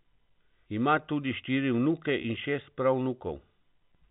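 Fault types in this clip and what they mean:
Packet loss with pitch repetition: At 2.22 s a 20 ms stretch of the speech goes missing, which fits a single lost packet. The receiver fills the hole by repeating the last pitch period. Because the gap is so short, it never fades toward silence. It comes across as a brief, slightly held buzz before normal speech resumes. The telephone-band G.711 coding around it adds only a faint, level-following hiss.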